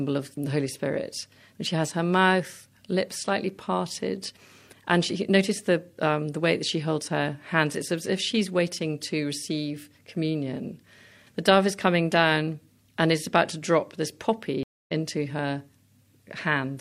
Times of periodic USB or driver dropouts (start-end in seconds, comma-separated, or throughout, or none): 2.50-4.49